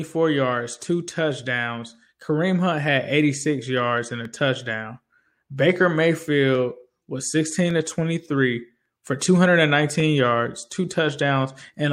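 Speech carrying a regular click from 0.8 s to 11.16 s, recurring about every 1.15 s, roughly ten times. These are clock drift buffer slips, likely from two devices whose clocks disagree by around 300 ppm, so a buffer periodically drops or repeats about fifteen samples.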